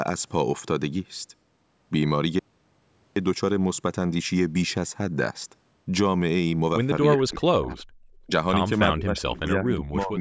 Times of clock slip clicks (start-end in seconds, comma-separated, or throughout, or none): none